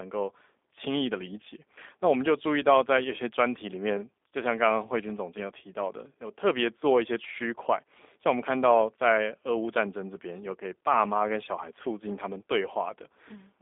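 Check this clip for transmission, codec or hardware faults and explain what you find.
One fault runs through the whole clip: G.729 codec damage. The speech sounds thin, slightly rough and synthetic, confined to roughly 300 Hz to 3.6 kHz with nothing above 3.8 kHz. At 8 kbit/s, G.729A rebuilds each 10 ms frame from a vocal tract filter, a pitch predictor and a few pulses, discarding fine detail.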